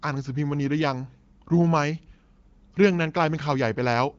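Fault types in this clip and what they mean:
No faults can be heard in this speech. The audio comes through an AMR wideband (HD Voice) codec at around 15.85 kbit/s, which leaves only light coding traces and nothing above about 7.3 kHz.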